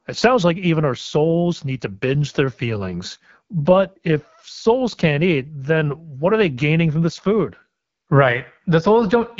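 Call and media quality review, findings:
AMR wideband (HD Voice) codec, whole clip: rough, raspy speech, obvious codec damage, nothing above about 7.5 kHz. The graininess suggests a low AMR-WB mode, around 8.85 kbit/s, with too few bits for the pulse-driven vocal tract model.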